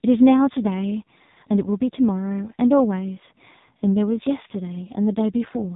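Speech coded throughout by the AMR narrowband mobile codec: nothing passes above about 3.8 kHz, and heavy buzzy, synthetic coloration points to a low mode near 5.9 kbps. Unlike a plain low-pass filter, which only dulls the sound, the vocal-tract model reshapes the voice itself.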